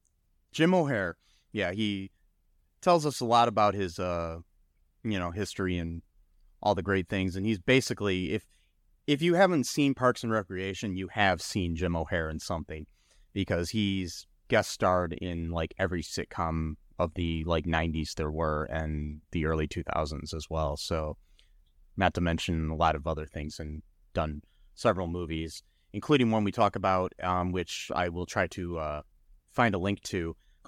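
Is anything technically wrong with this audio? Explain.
No, no technical faults detected.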